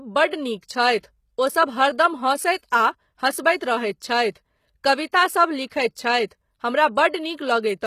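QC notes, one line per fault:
throughout: HE-AAC compression, plainly audible. The treble sounds synthetic, and sibilants come out gritty and metallic because the upper bands are likely rebuilt by spectral band replication rather than coded directly. Copied lower harmonics fail to line up above the crossover. The damage is consistent with a bitrate near 20 kbps. A spectrogram shows nothing above 14.9 kHz, with a blocky, repeated-looking texture in the top bands instead of natural harmonic detail.
5.67–5.71 s: pre-echo. A short hiss rises about 49 ms ahead of a sharp speech onset, and the attack itself sounds softened and smeared. The codec spread quantisation noise across the whole transform block, so noise sized for the loud attack leaked into the quiet moment before it. On a spectrogram this appears as a broadband smudge preceding the onset. The waveform shows low-level fuzz where near-silence should sit.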